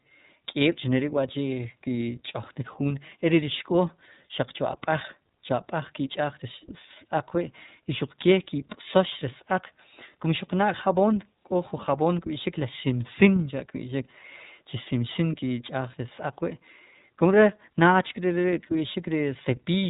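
From start to finish the speech carries iLBC codec damage: nothing above about 3.8 kHz survives, and the excitation is rebuilt block by block, which fits 30 ms frames at roughly 13.3 kbps. The result is muffled, plainly rough and somewhat synthetic throughout.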